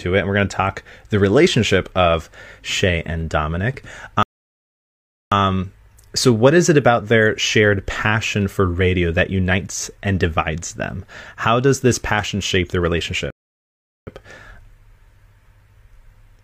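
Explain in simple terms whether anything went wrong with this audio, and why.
Rebuffering stalls at 4.23 to 5.32 s and 13.30 to 14.07 s, the second just after "this passion shape their". The player ran out of downloaded speech and went silent, about 1.1 s and 0.8 s, then resumed exactly where it stopped, adding time but losing nothing.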